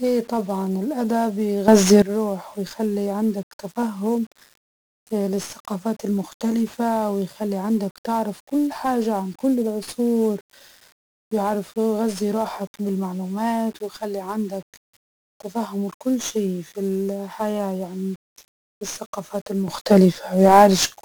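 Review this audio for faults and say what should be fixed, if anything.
The whole speech track sounds fuzzy and crackly, with a dense hiss sitting over the voice and the upper treble smothered beneath it. That is heavy 1-bit DFPWM compression. Each sample carries only one bit, nudging an adaptive level up or down, so fine detail turns into strong broadband quantisation noise. The amount of grit fits a rate of about 48 kbps. To prevent it, keep a higher-resolution master and use a codec with more bits per sample.

Between 1.68 and 2.02 s, and again from 19.68 s to the end, the speech and the background hiss lurch up together by about 12 dB, with no fade into the louder level. These are sudden gain jumps, most likely from a gain setting or bit shift applied instantly rather than ramped. Because the hiss rises with the voice, the change happened after the sound was captured, not from anyone speaking louder. 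To prevent it, ramp every gain change smoothly over a few milliseconds instead of switching it between samples.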